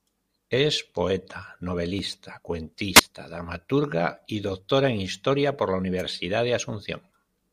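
At 2.95 to 3.01 s, after "poeta novelista", a wireless microphone squelch dropout: the radio signal fades, hiss rises, then the receiver mutes for about 16 ms before "dramaturga y" returns. At 5.98 to 6.02 s, following "por la", a wireless microphone noise hit, where a reflection-cancelled fade lets receiver noise surge into a short static swish over the speech.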